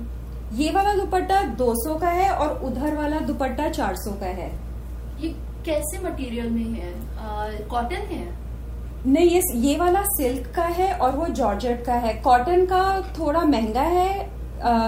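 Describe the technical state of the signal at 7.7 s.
At 7.7 s the signal is intact, with no fault present at that moment.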